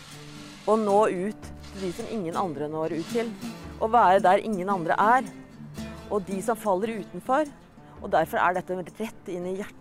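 No technical faults occur at any point in this audio.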